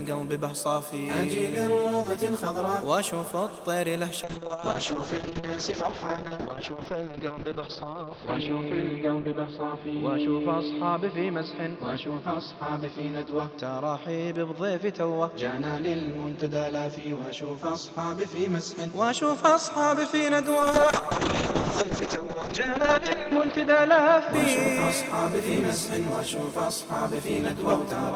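From 4.24 s to 20.49 s there's a call bitrate drop. The encoder gets starved of bits, so the sound turns coarse and watery. At its worst, for about 3.9 s, the top end is cut off near 6 kHz, which fits a fall from around 32 to 7 kbps. Right after, from 20.6 s to 24.89 s, a second drop brings back that rough texture, bottoming out for about 2.5 s at what sounds like roughly 6 kbps.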